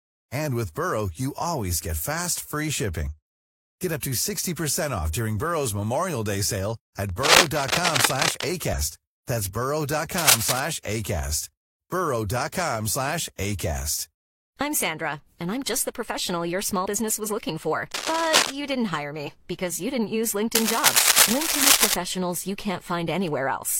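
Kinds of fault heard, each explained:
Damaged data in a compressed stream: brief chirps or blips at 3.07 s just after "fast free", 8.73 s, 16.81 s just before "was looking for", 19.23 s and 21.6 s. Corrupted bytes make the decoder misread frames, lose sync and hunt for the next frame header.
Cable scratch noise: dense, uneven scratching and rustling over the speech at 7.1–8.4 s, 10.2–10.6 s, 17.9–18.5 s and 20.5–21.9 s, roughly as loud as the speech or louder. The likely cause is a worn cable or connector moved, its contact resistance jumping rapidly.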